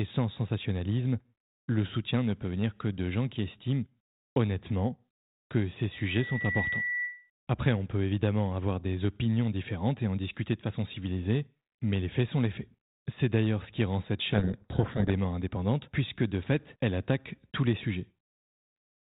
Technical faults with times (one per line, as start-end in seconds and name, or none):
5.92-7.30 loudspeaker feedback squeal
14.32-15.18 codec payload misread